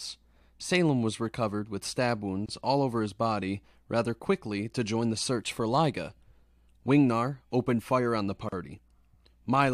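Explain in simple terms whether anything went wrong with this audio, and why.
Yes, something went wrong. The audio was encoded in separate pieces and joined without trimming the padding each encoder adds, leaving a gap at a join of encoded pieces. Brief silences cut in at 2.46 s, after "was recovered with stab" (about 26 ms), and at 8.49 s, after "opened fire on the" (about 37 ms), six seconds apart.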